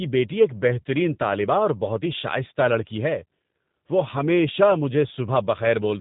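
From start to end, the speech carries plainly audible G.729 codec damage. Nothing passes above about 3.8 kHz, so it sounds narrow and muffled. The coder rebuilds each 10 ms frame from a filter, pitch model and few pulses. That leaves a rough, synthetic edge, consistent with 8 kbit/s.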